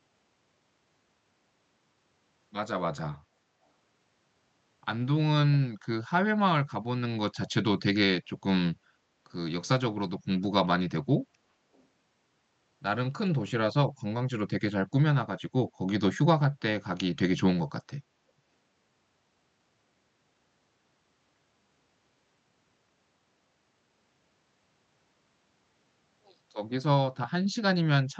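Echo leak, 11.74 to 11.84 s: a very faint scrap of speech returns 379 ms late, likely loudspeaker sound escaping the far end's echo canceller.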